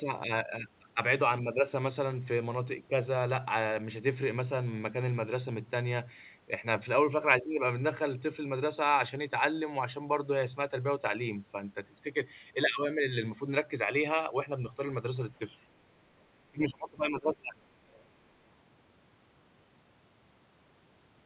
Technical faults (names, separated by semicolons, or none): speech suppressed in double talk; other side's voice leaking through